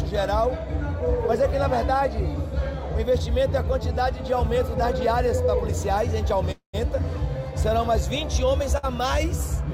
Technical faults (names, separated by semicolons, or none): call audio freeze; short stall from a late packet